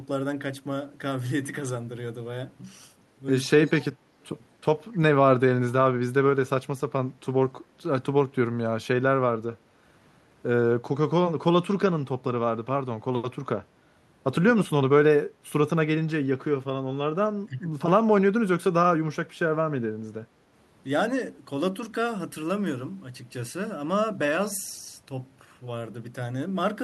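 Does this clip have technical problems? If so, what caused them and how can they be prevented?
Yes. Two brief dips, at 14.53 to 14.7 s and 17.46 to 17.7 s, are likely speech suppressed in double talk: with both ends talking, the echo canceller couldn't tell this talker's voice from returning loudspeaker echo and attenuated everything it picked up. The speech sinks by roughly 20 dB in the first dip and around 15 dB in the second, each lasting only a fraction of a second. Better echo-path modelling, a double-talk detector, or headsets on this end would prevent it.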